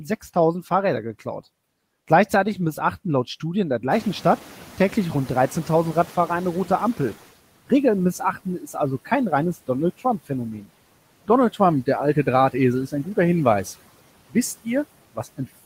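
Noise suppressor catching up, 3.9 to 7.24 s: the room noise in this speech recording jumps about 17 dB near 4 s and leaks through until the suppressor's estimate adapts over about 3.3 s, then drops by about 12 dB. Speech cut by the noise suppressor, 8.19 to 8.76 s and 15.15 to 15.4 s: the suppressor mistakes brief bits of speech for noise and turns them down by up to about 10 and 15 dB, so they sound swallowed.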